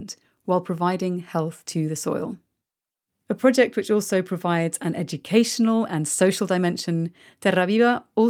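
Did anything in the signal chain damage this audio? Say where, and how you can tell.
No, nothing along the way seems to have touched this speech recording; I can't hear anything that points to a problem at any stage.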